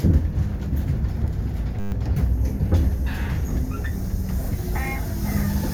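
From 1.80 to 1.92 s the sound collapses into a steady 100 Hz buzz, a system hang loop: the computer stalled while the hardware kept replaying one 10 ms slice of its ring buffer, twelve times over, losing roughly a tenth of a second.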